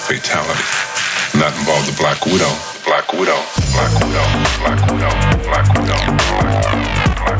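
Gain pumping runs through the whole recording. The swing is around 10 dB. The likely cause is input gain set far too high, with a fast limiter or compressor clamping each peak. Loud and quiet passages therefore sit close together, and the audio sounds squashed. The call microphone processing caps the band at 8 kHz, as expected for a call.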